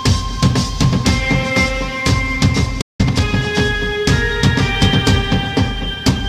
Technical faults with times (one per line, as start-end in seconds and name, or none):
2.81-3.01 playback stall
3.01-3.35 time-compressed catch-up